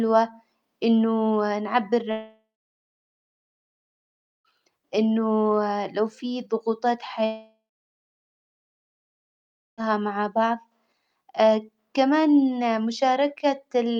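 From 2.11 to 4.52 s, and again from 7.26 s after "لو في ضغوطات" to 9.81 s at "مع بعظ", a long network dropout likely cuts the speech. Each gap starts with a short fading buzz, then about two seconds of flat waveform and blank spectrogram.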